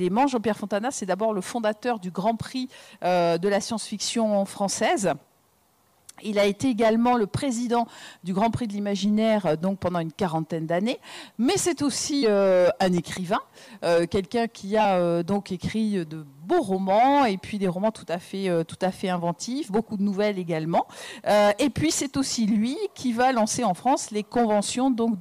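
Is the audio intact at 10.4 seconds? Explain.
Yes, at 10.4 seconds the audio is intact, with no dropout, click, distortion or other fault at that point.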